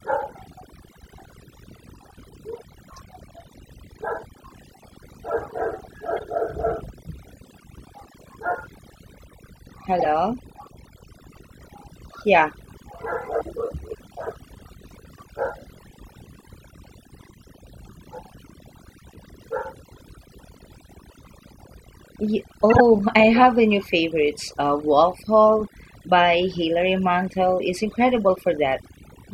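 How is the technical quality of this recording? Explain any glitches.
The technical quality is compromised by two problems: heavy-handed processing across the whole recording and a handful of brief decoding glitches.

Overdone noise removal runs throughout. The noise reducer was set so aggressively that frequency bands near its noise estimate are pulled down or switched off, taking the quieter parts of the speech with them. The background sinks to near silence scattered with twinkling specks.

Corrupt frame decoded errors occur at 6.17–6.23 s, 9.99–10.06 s, 12.97 s, 22.70–22.81 s and 28.35–28.38 s. In each case the decoder played damaged compressed data, spraying energy into the wrong frequencies as short chirps or noise bursts. The one at 12.97 s is faint, while the one near 22.7 s lasts longest and is the loudest.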